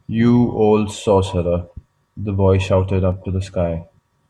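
A speech clip with a regular click recurring about every 1.07 seconds from 0.97 s to 4.2 s, around four times in all. These are likely clock drift buffer slips: two devices on independent clocks, off by something near 150 ppm, periodically dropping or repeating a few samples.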